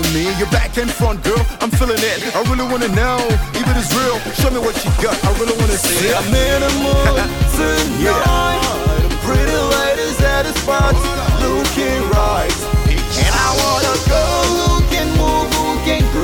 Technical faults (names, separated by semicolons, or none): none